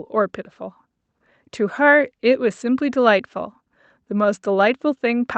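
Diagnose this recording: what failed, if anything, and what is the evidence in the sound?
Nothing has failed here: the speech has passed through a call path whose band stops at 8 kHz, in a way that fits Opus running at around 64 kbps, and the signal stays continuous and steady throughout.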